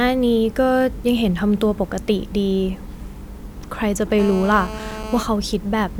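At 4.19 s a GSM phone buzz cuts in and holds until 5.23 s. It's a hard, raspy drone at about 217 Hz with plenty of harmonics stacked on top, sitting about 11 dB below the speech and steady for its whole run, the way it sounds when a phone on a call sits near the gear. The handset's bursts get rectified in the audio circuit and land as buzz.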